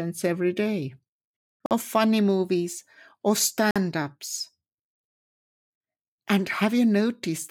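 Speech with a gap between chunks: silent holes of about 48 ms at 1.66, 3.71 and 5.76 s, evenly spaced like 2-second chunk joins. Unlike dropouts, no sound is lost.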